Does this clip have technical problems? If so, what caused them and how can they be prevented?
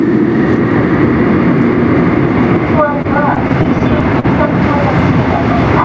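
Yes. Throughout the clip the gain swings by about 10 dB as loud sounds arrive, so the level breathes and everything feels squashed toward one loudness. This is gain pumping, most likely from the input gain being set far too high and a fast limiter or compressor repeatedly clamping it down on every peak. Setting the microphone gain lower, with real headroom, keeps the limiter from working on every loud sound.

Between 3.02 and 4.26 s the audio drags and stutters through nine short stalls, the longest about 41 ms. Together they add roughly 137 ms of stretched sound, with nothing actually lost. These repeated stalls (stutter) come from packets arriving late or more slowly than playback, so the jitter buffer kept running dry and the receiver extended the last sound until more data came in. A steadier network path, or a slightly deeper jitter buffer, would prevent it. The call path's G.722 coding, which leaves nothing above 8 kHz, sounds as expected.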